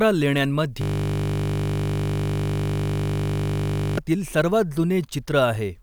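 From 0.82 to 3.98 s, a system hang loop takes over the speech. The same 20 ms slice repeats about 158 times, a steady 50 Hz buzz.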